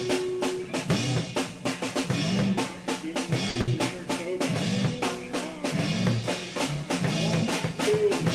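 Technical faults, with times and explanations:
3.49–3.58 s and 3.61–3.70 s, burst of packet loss: two closely spaced dropouts in the music, each with about 60 ms of audio missing. In both, a run of packets never arrived in time, so the receiver stretched the last good sound to fill the hole and faded it down, heard as a brief smeared, dimming hold. The music then jumps ahead, skipping the lost stretch, giving a stutter where two small chunks vanish within a quarter second.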